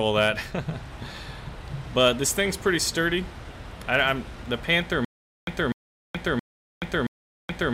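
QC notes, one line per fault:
5.05–7.74 s (to the end): stutter with silent gaps. A fragment of about 248 ms repeats 4 times, each followed by about 425 ms of digital silence, giving a steady 673 ms cycle. This is likely a stalled player or stream replaying its last buffer on each retry and then running dry. The audio due in those gaps is lost. The waveform shows identical blocks separated by flat silent stretches, and the spectrogram shows matching patches split by fully empty columns.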